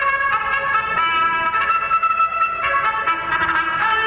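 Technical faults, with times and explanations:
Throughout: gain pumping. The gain drops back by roughly 10 dB whenever a loud sound arrives, so levels swell and duck in step with the signal and the dynamics sound squashed. This likely comes from input gain set far too high, with a fast limiter or compressor clamping each peak and releasing in the pauses. The narrowband call path has nothing above 4 kHz.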